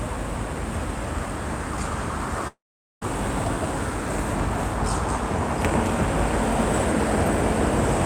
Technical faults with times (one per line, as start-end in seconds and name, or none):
2.47-3.03 long network dropout